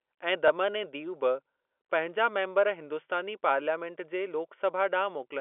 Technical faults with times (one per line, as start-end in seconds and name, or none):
0.48-0.50 packet loss with last packet repeated